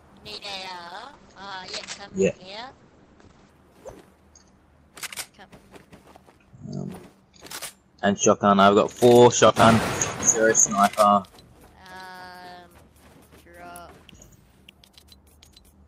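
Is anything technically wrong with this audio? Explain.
Yes, there is a call bitrate drop from 0.37 s to 3.61 s. The call's bandwidth estimate fell, and the encoder cut its bit budget sharply, for about 3.2 s. The coarser coding fits a fall from around 48 kbps to roughly 10 kbps. At that rate the codec also narrows the band, so the top end drops from 20 kHz to 8 kHz. The sound turns muffled and rough, with a watery grain, until the bitrate recovers at 3.61 s.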